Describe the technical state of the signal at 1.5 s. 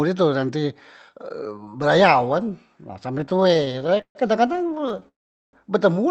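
At 1.5 s the speech is intact, with no dropout, glitch or other fault, only the band-limiting of the call path's Opus codec, which carries nothing above about 8 kHz.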